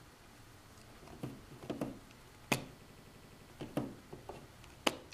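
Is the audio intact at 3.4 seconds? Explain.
No. A system hang loop runs from 2.82 to 3.50 s: the system froze while the hardware kept replaying the same 85.33 ms buffer, which fits a 4096-sample buffer, eight times at 11.7 Hz. It sounds like a machine-gun stutter, and about 0.7 s of audio is lost.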